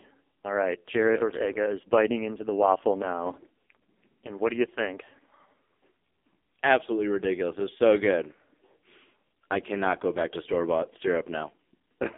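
A speech clip passed through the AMR narrowband mobile codec from start to finish, with heavy damage: buzzy, synthetic vowels that fit a very low rate near 5 kbps. A spectrogram shows a band of roughly 250 Hz to 3.6 kHz, empty above.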